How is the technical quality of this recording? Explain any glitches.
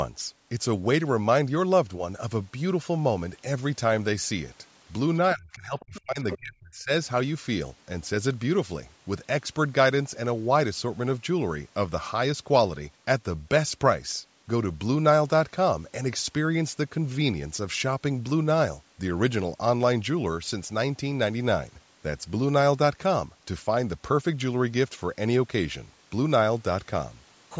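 The speech has two related call-processing glitches, both in a short window between about 5.3 and 6.9 s.

Speech suppressed in double talk, 5.34 to 6.91 s: the talker's speech sinks in pieces, by up to roughly 35 dB. The likely cause is an echo canceller mistaking overlapping speech for echo and muting both.

Other side's voice leaking through, 5.80 to 6.01 s and 6.31 to 6.38 s: brief scraps of a second voice appear, around 20 dB and then 10 dB below the talker. They are probably loudspeaker playback that escaped cancellation.

The call's normal microphone processing keeps the audio band-limited to about 8 kHz.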